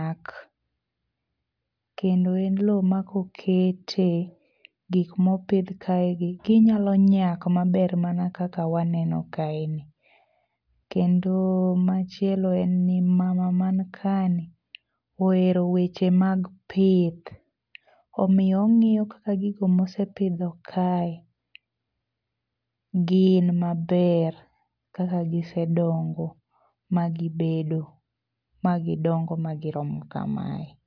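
A speech recording with nothing technically wrong with it.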